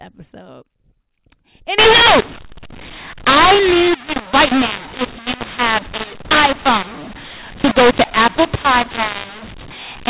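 From 1.78 s to the end of the clip, the speech shows mu-law and A-law mixed up. The signal was written as mu-law but read back as A-law, so each 8-bit code maps onto the wrong logarithmic segment. Sample levels come out scrambled, some too loud and some too soft, and the quietest codes jump well above silence. Speech turns harsh and gritty, and the gaps between phrases fill with noise, all within the 4 kHz band of the 8 kHz G.711 telephone coding.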